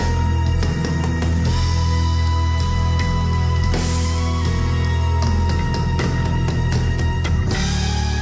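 No audible technical faults here.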